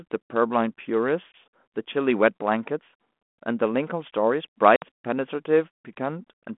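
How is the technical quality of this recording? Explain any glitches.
The recording has two glitches, both packet loss on an ADPCM call. The speech comes through a 200 Hz to 3.4 kHz telephone band at a 32 kbit/s G.726 rate.

At 1.32 s and from 4.76 to 4.84 s, sharp-edged silences of about 20 ms and 60 ms appear. The longer one fits roughly three lost packets. Unlike a plain dropout, the speech resumes slightly distorted. That happens because the decoder's predictor and step size drifted from the sender's and need tens of milliseconds to resynchronise.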